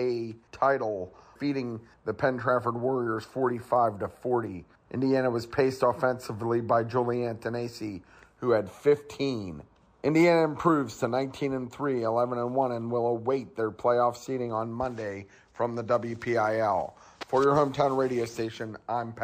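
No technical faults can be heard anywhere in the recording.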